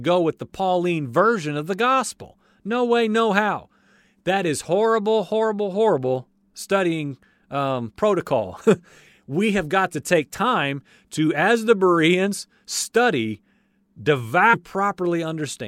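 Near the end of this speech recording, at about 14.53 s, the sound abruptly jumps ahead with a brief blip. This is likely a stream segment skipped: one piece of the segmented stream failed to load, the player carried on with the next, and that portion of the programme is simply gone.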